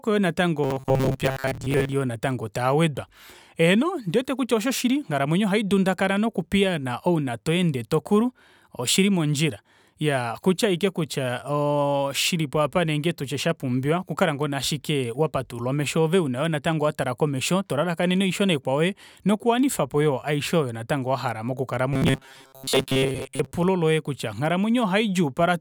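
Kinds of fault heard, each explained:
Robotic sound from repeated short buffers: From 0.64 to 1.94 s and again from 21.93 to 23.52 s, the speech turns into a rigid, metallic buzz locked at 133 Hz that only loosely follows the words. The likely cause is audio arriving too seldom, so playback keeps looping a segment of about 7.5 ms. That loop length sets the pitch, and most of the real signal in those stretches is skipped.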